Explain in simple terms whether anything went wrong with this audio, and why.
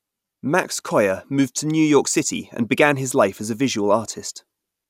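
Nothing went wrong here: the speech signal holds steady throughout, with no dropouts, glitches or other technical faults to be heard.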